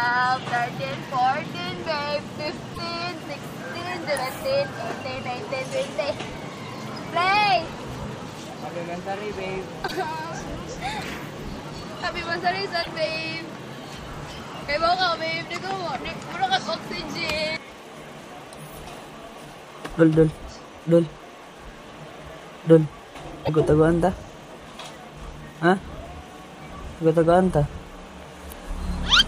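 Damaged data in a compressed stream produces four short blips, at 2.71 to 2.79 s, 9.84 to 9.92 s, 12.79 to 12.87 s and 23.42 to 23.49 s, each lasting about 70 to 85 ms. At each point part of the encoded stream arrives corrupted, so the decoder misreads or discards the affected frames, loses synchronisation and hunts for the next valid frame header. What emerges is a brief chirp or squawk that cuts across the sound.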